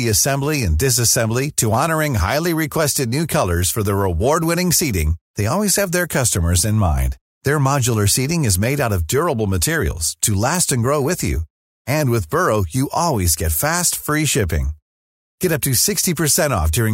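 At 1.74 s there's a single sharp click, and it's most likely dropped samples. A tiny sliver of the stream, a fraction of a millisecond, goes missing, so the waveform leaps straight from one value to a later one instead of moving smoothly between them. That gap is far too short to take out any of the speech. What you get is just the discontinuity itself, a quick tick that would show up as a thin vertical line across the spectrum.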